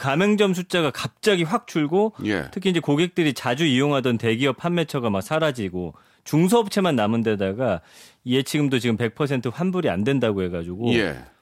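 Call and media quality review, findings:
No faults found in recording.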